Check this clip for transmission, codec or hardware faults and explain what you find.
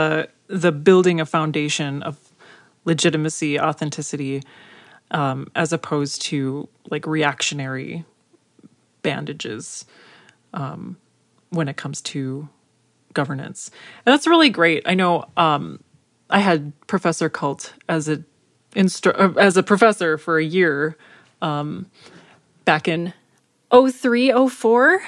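One fault appears near the end. From 22.96 s to 25.07 s the speech runs at the wrong sample rate: it plays about 1.09 times too fast and about 1.5 semitones sharp, which fits audio recorded near 22 kHz being played at 24 kHz without conversion. Speed and pitch rise together by the same ratio, so the speech sounds slightly high and hurried. A pitch shifter would raise pitch without changing tempo, and a time-stretch would change tempo without changing pitch.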